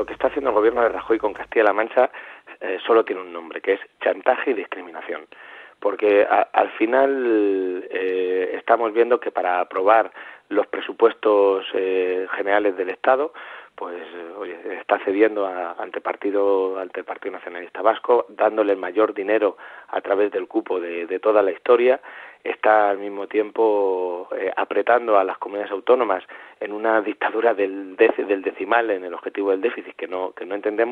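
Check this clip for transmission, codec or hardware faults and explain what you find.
Nothing stood out on listening to the clip.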